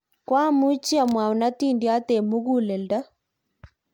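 Repeated lossy re-encoding, likely several MP3 passes at a rate near 100 kbit/s, runs through the whole clip as generation loss. The stacked quantisation leaves the speech swirly, hollow and smeared, with softened attacks, and nothing above about 19.9 kHz.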